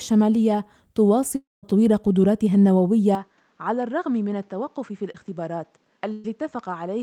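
At 1.35 s the stream was likely interrupted by a long network dropout that lasted until 1.65 s and lost about 280 ms of audio. The receiver carried the last sound forward and let it fade as a buzz or hiss, then left roughly 0.19 s of silence before the signal returned. When the audio resumes, it picks up further on, and the stretch that went missing is simply absent.

From 3.15 s to the end, the input was likely switched to a poorer device. There is no gap at the changeover: the sound turns duller and more boxed-in at once. Nothing above 8 kHz gets through, so the top end loses its air and sibilance. The level drops by around 10 dB, and a new background noise floor appears, sitting roughly 40 dB beneath the signal.

Between 5.12 and 5.16 s there is a short concealed packet loss: about 20 ms of audio never reached the decoder in time. The receiver patched the hole by extending the sound that came just before it and then blending back into the real signal. 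It comes across as a brief smear or wobble, lasting only a few hundredths of a second, inside the dulled audio.

From 6.12 to 6.26 s a burst of packet loss removes about 120 ms. The receiver extended the preceding sound across the gap and faded it down as the gap went on, so there is no silence. Instead you hear a held, weakening continuation of what came before, then a jump forward as the real audio returns without the part that was lost.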